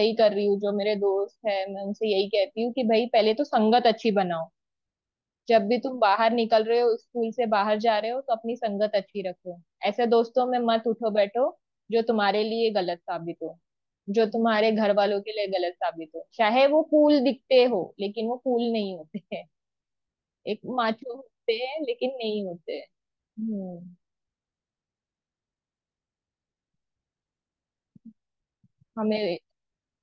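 The speech recording shows no technical faults at any point.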